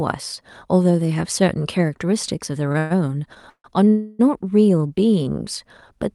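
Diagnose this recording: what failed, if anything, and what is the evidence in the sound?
At 2.72 to 2.76 s a sound in the speech is held slightly too long, with a faint buzzy smear, and then continues with nothing skipped. This is a short stall from a late packet, at the network and jitter-buffer stage. One packet missed its playout time, the buffer ran dry, and the receiver stretched the last sound by about 21 ms until the packet arrived.

The speech stops moving and turns into a fading buzz three times: 2.78 to 2.92 s, 3.50 to 3.66 s (decaying to silence for about 80 ms), and 3.88 to 4.21 s, the longest at about 0.3 s. Each time, the speech resumes exactly where it stopped. This is call audio freeze, likely caused by packets being held up on the network so the jitter buffer emptied and the receiver filled the gap with concealment. The call codec's limited top end, which points to a band edge near 12 kHz, is part of that path.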